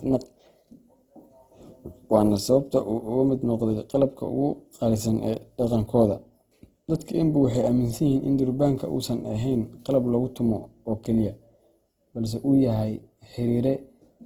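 The clip is speech, and the damage runs through all of it. The likely cause is Opus compression in its music-oriented CELT mode. The band energies survive and the full bandwidth stays open, and there are no obvious spectral holes or swirling. However, the fine detail inside each band has been replaced by folded or noise-filled content, so voiced sounds come across plainly grainy and rough. The degree of damage fits a bitrate of about 16 kbps.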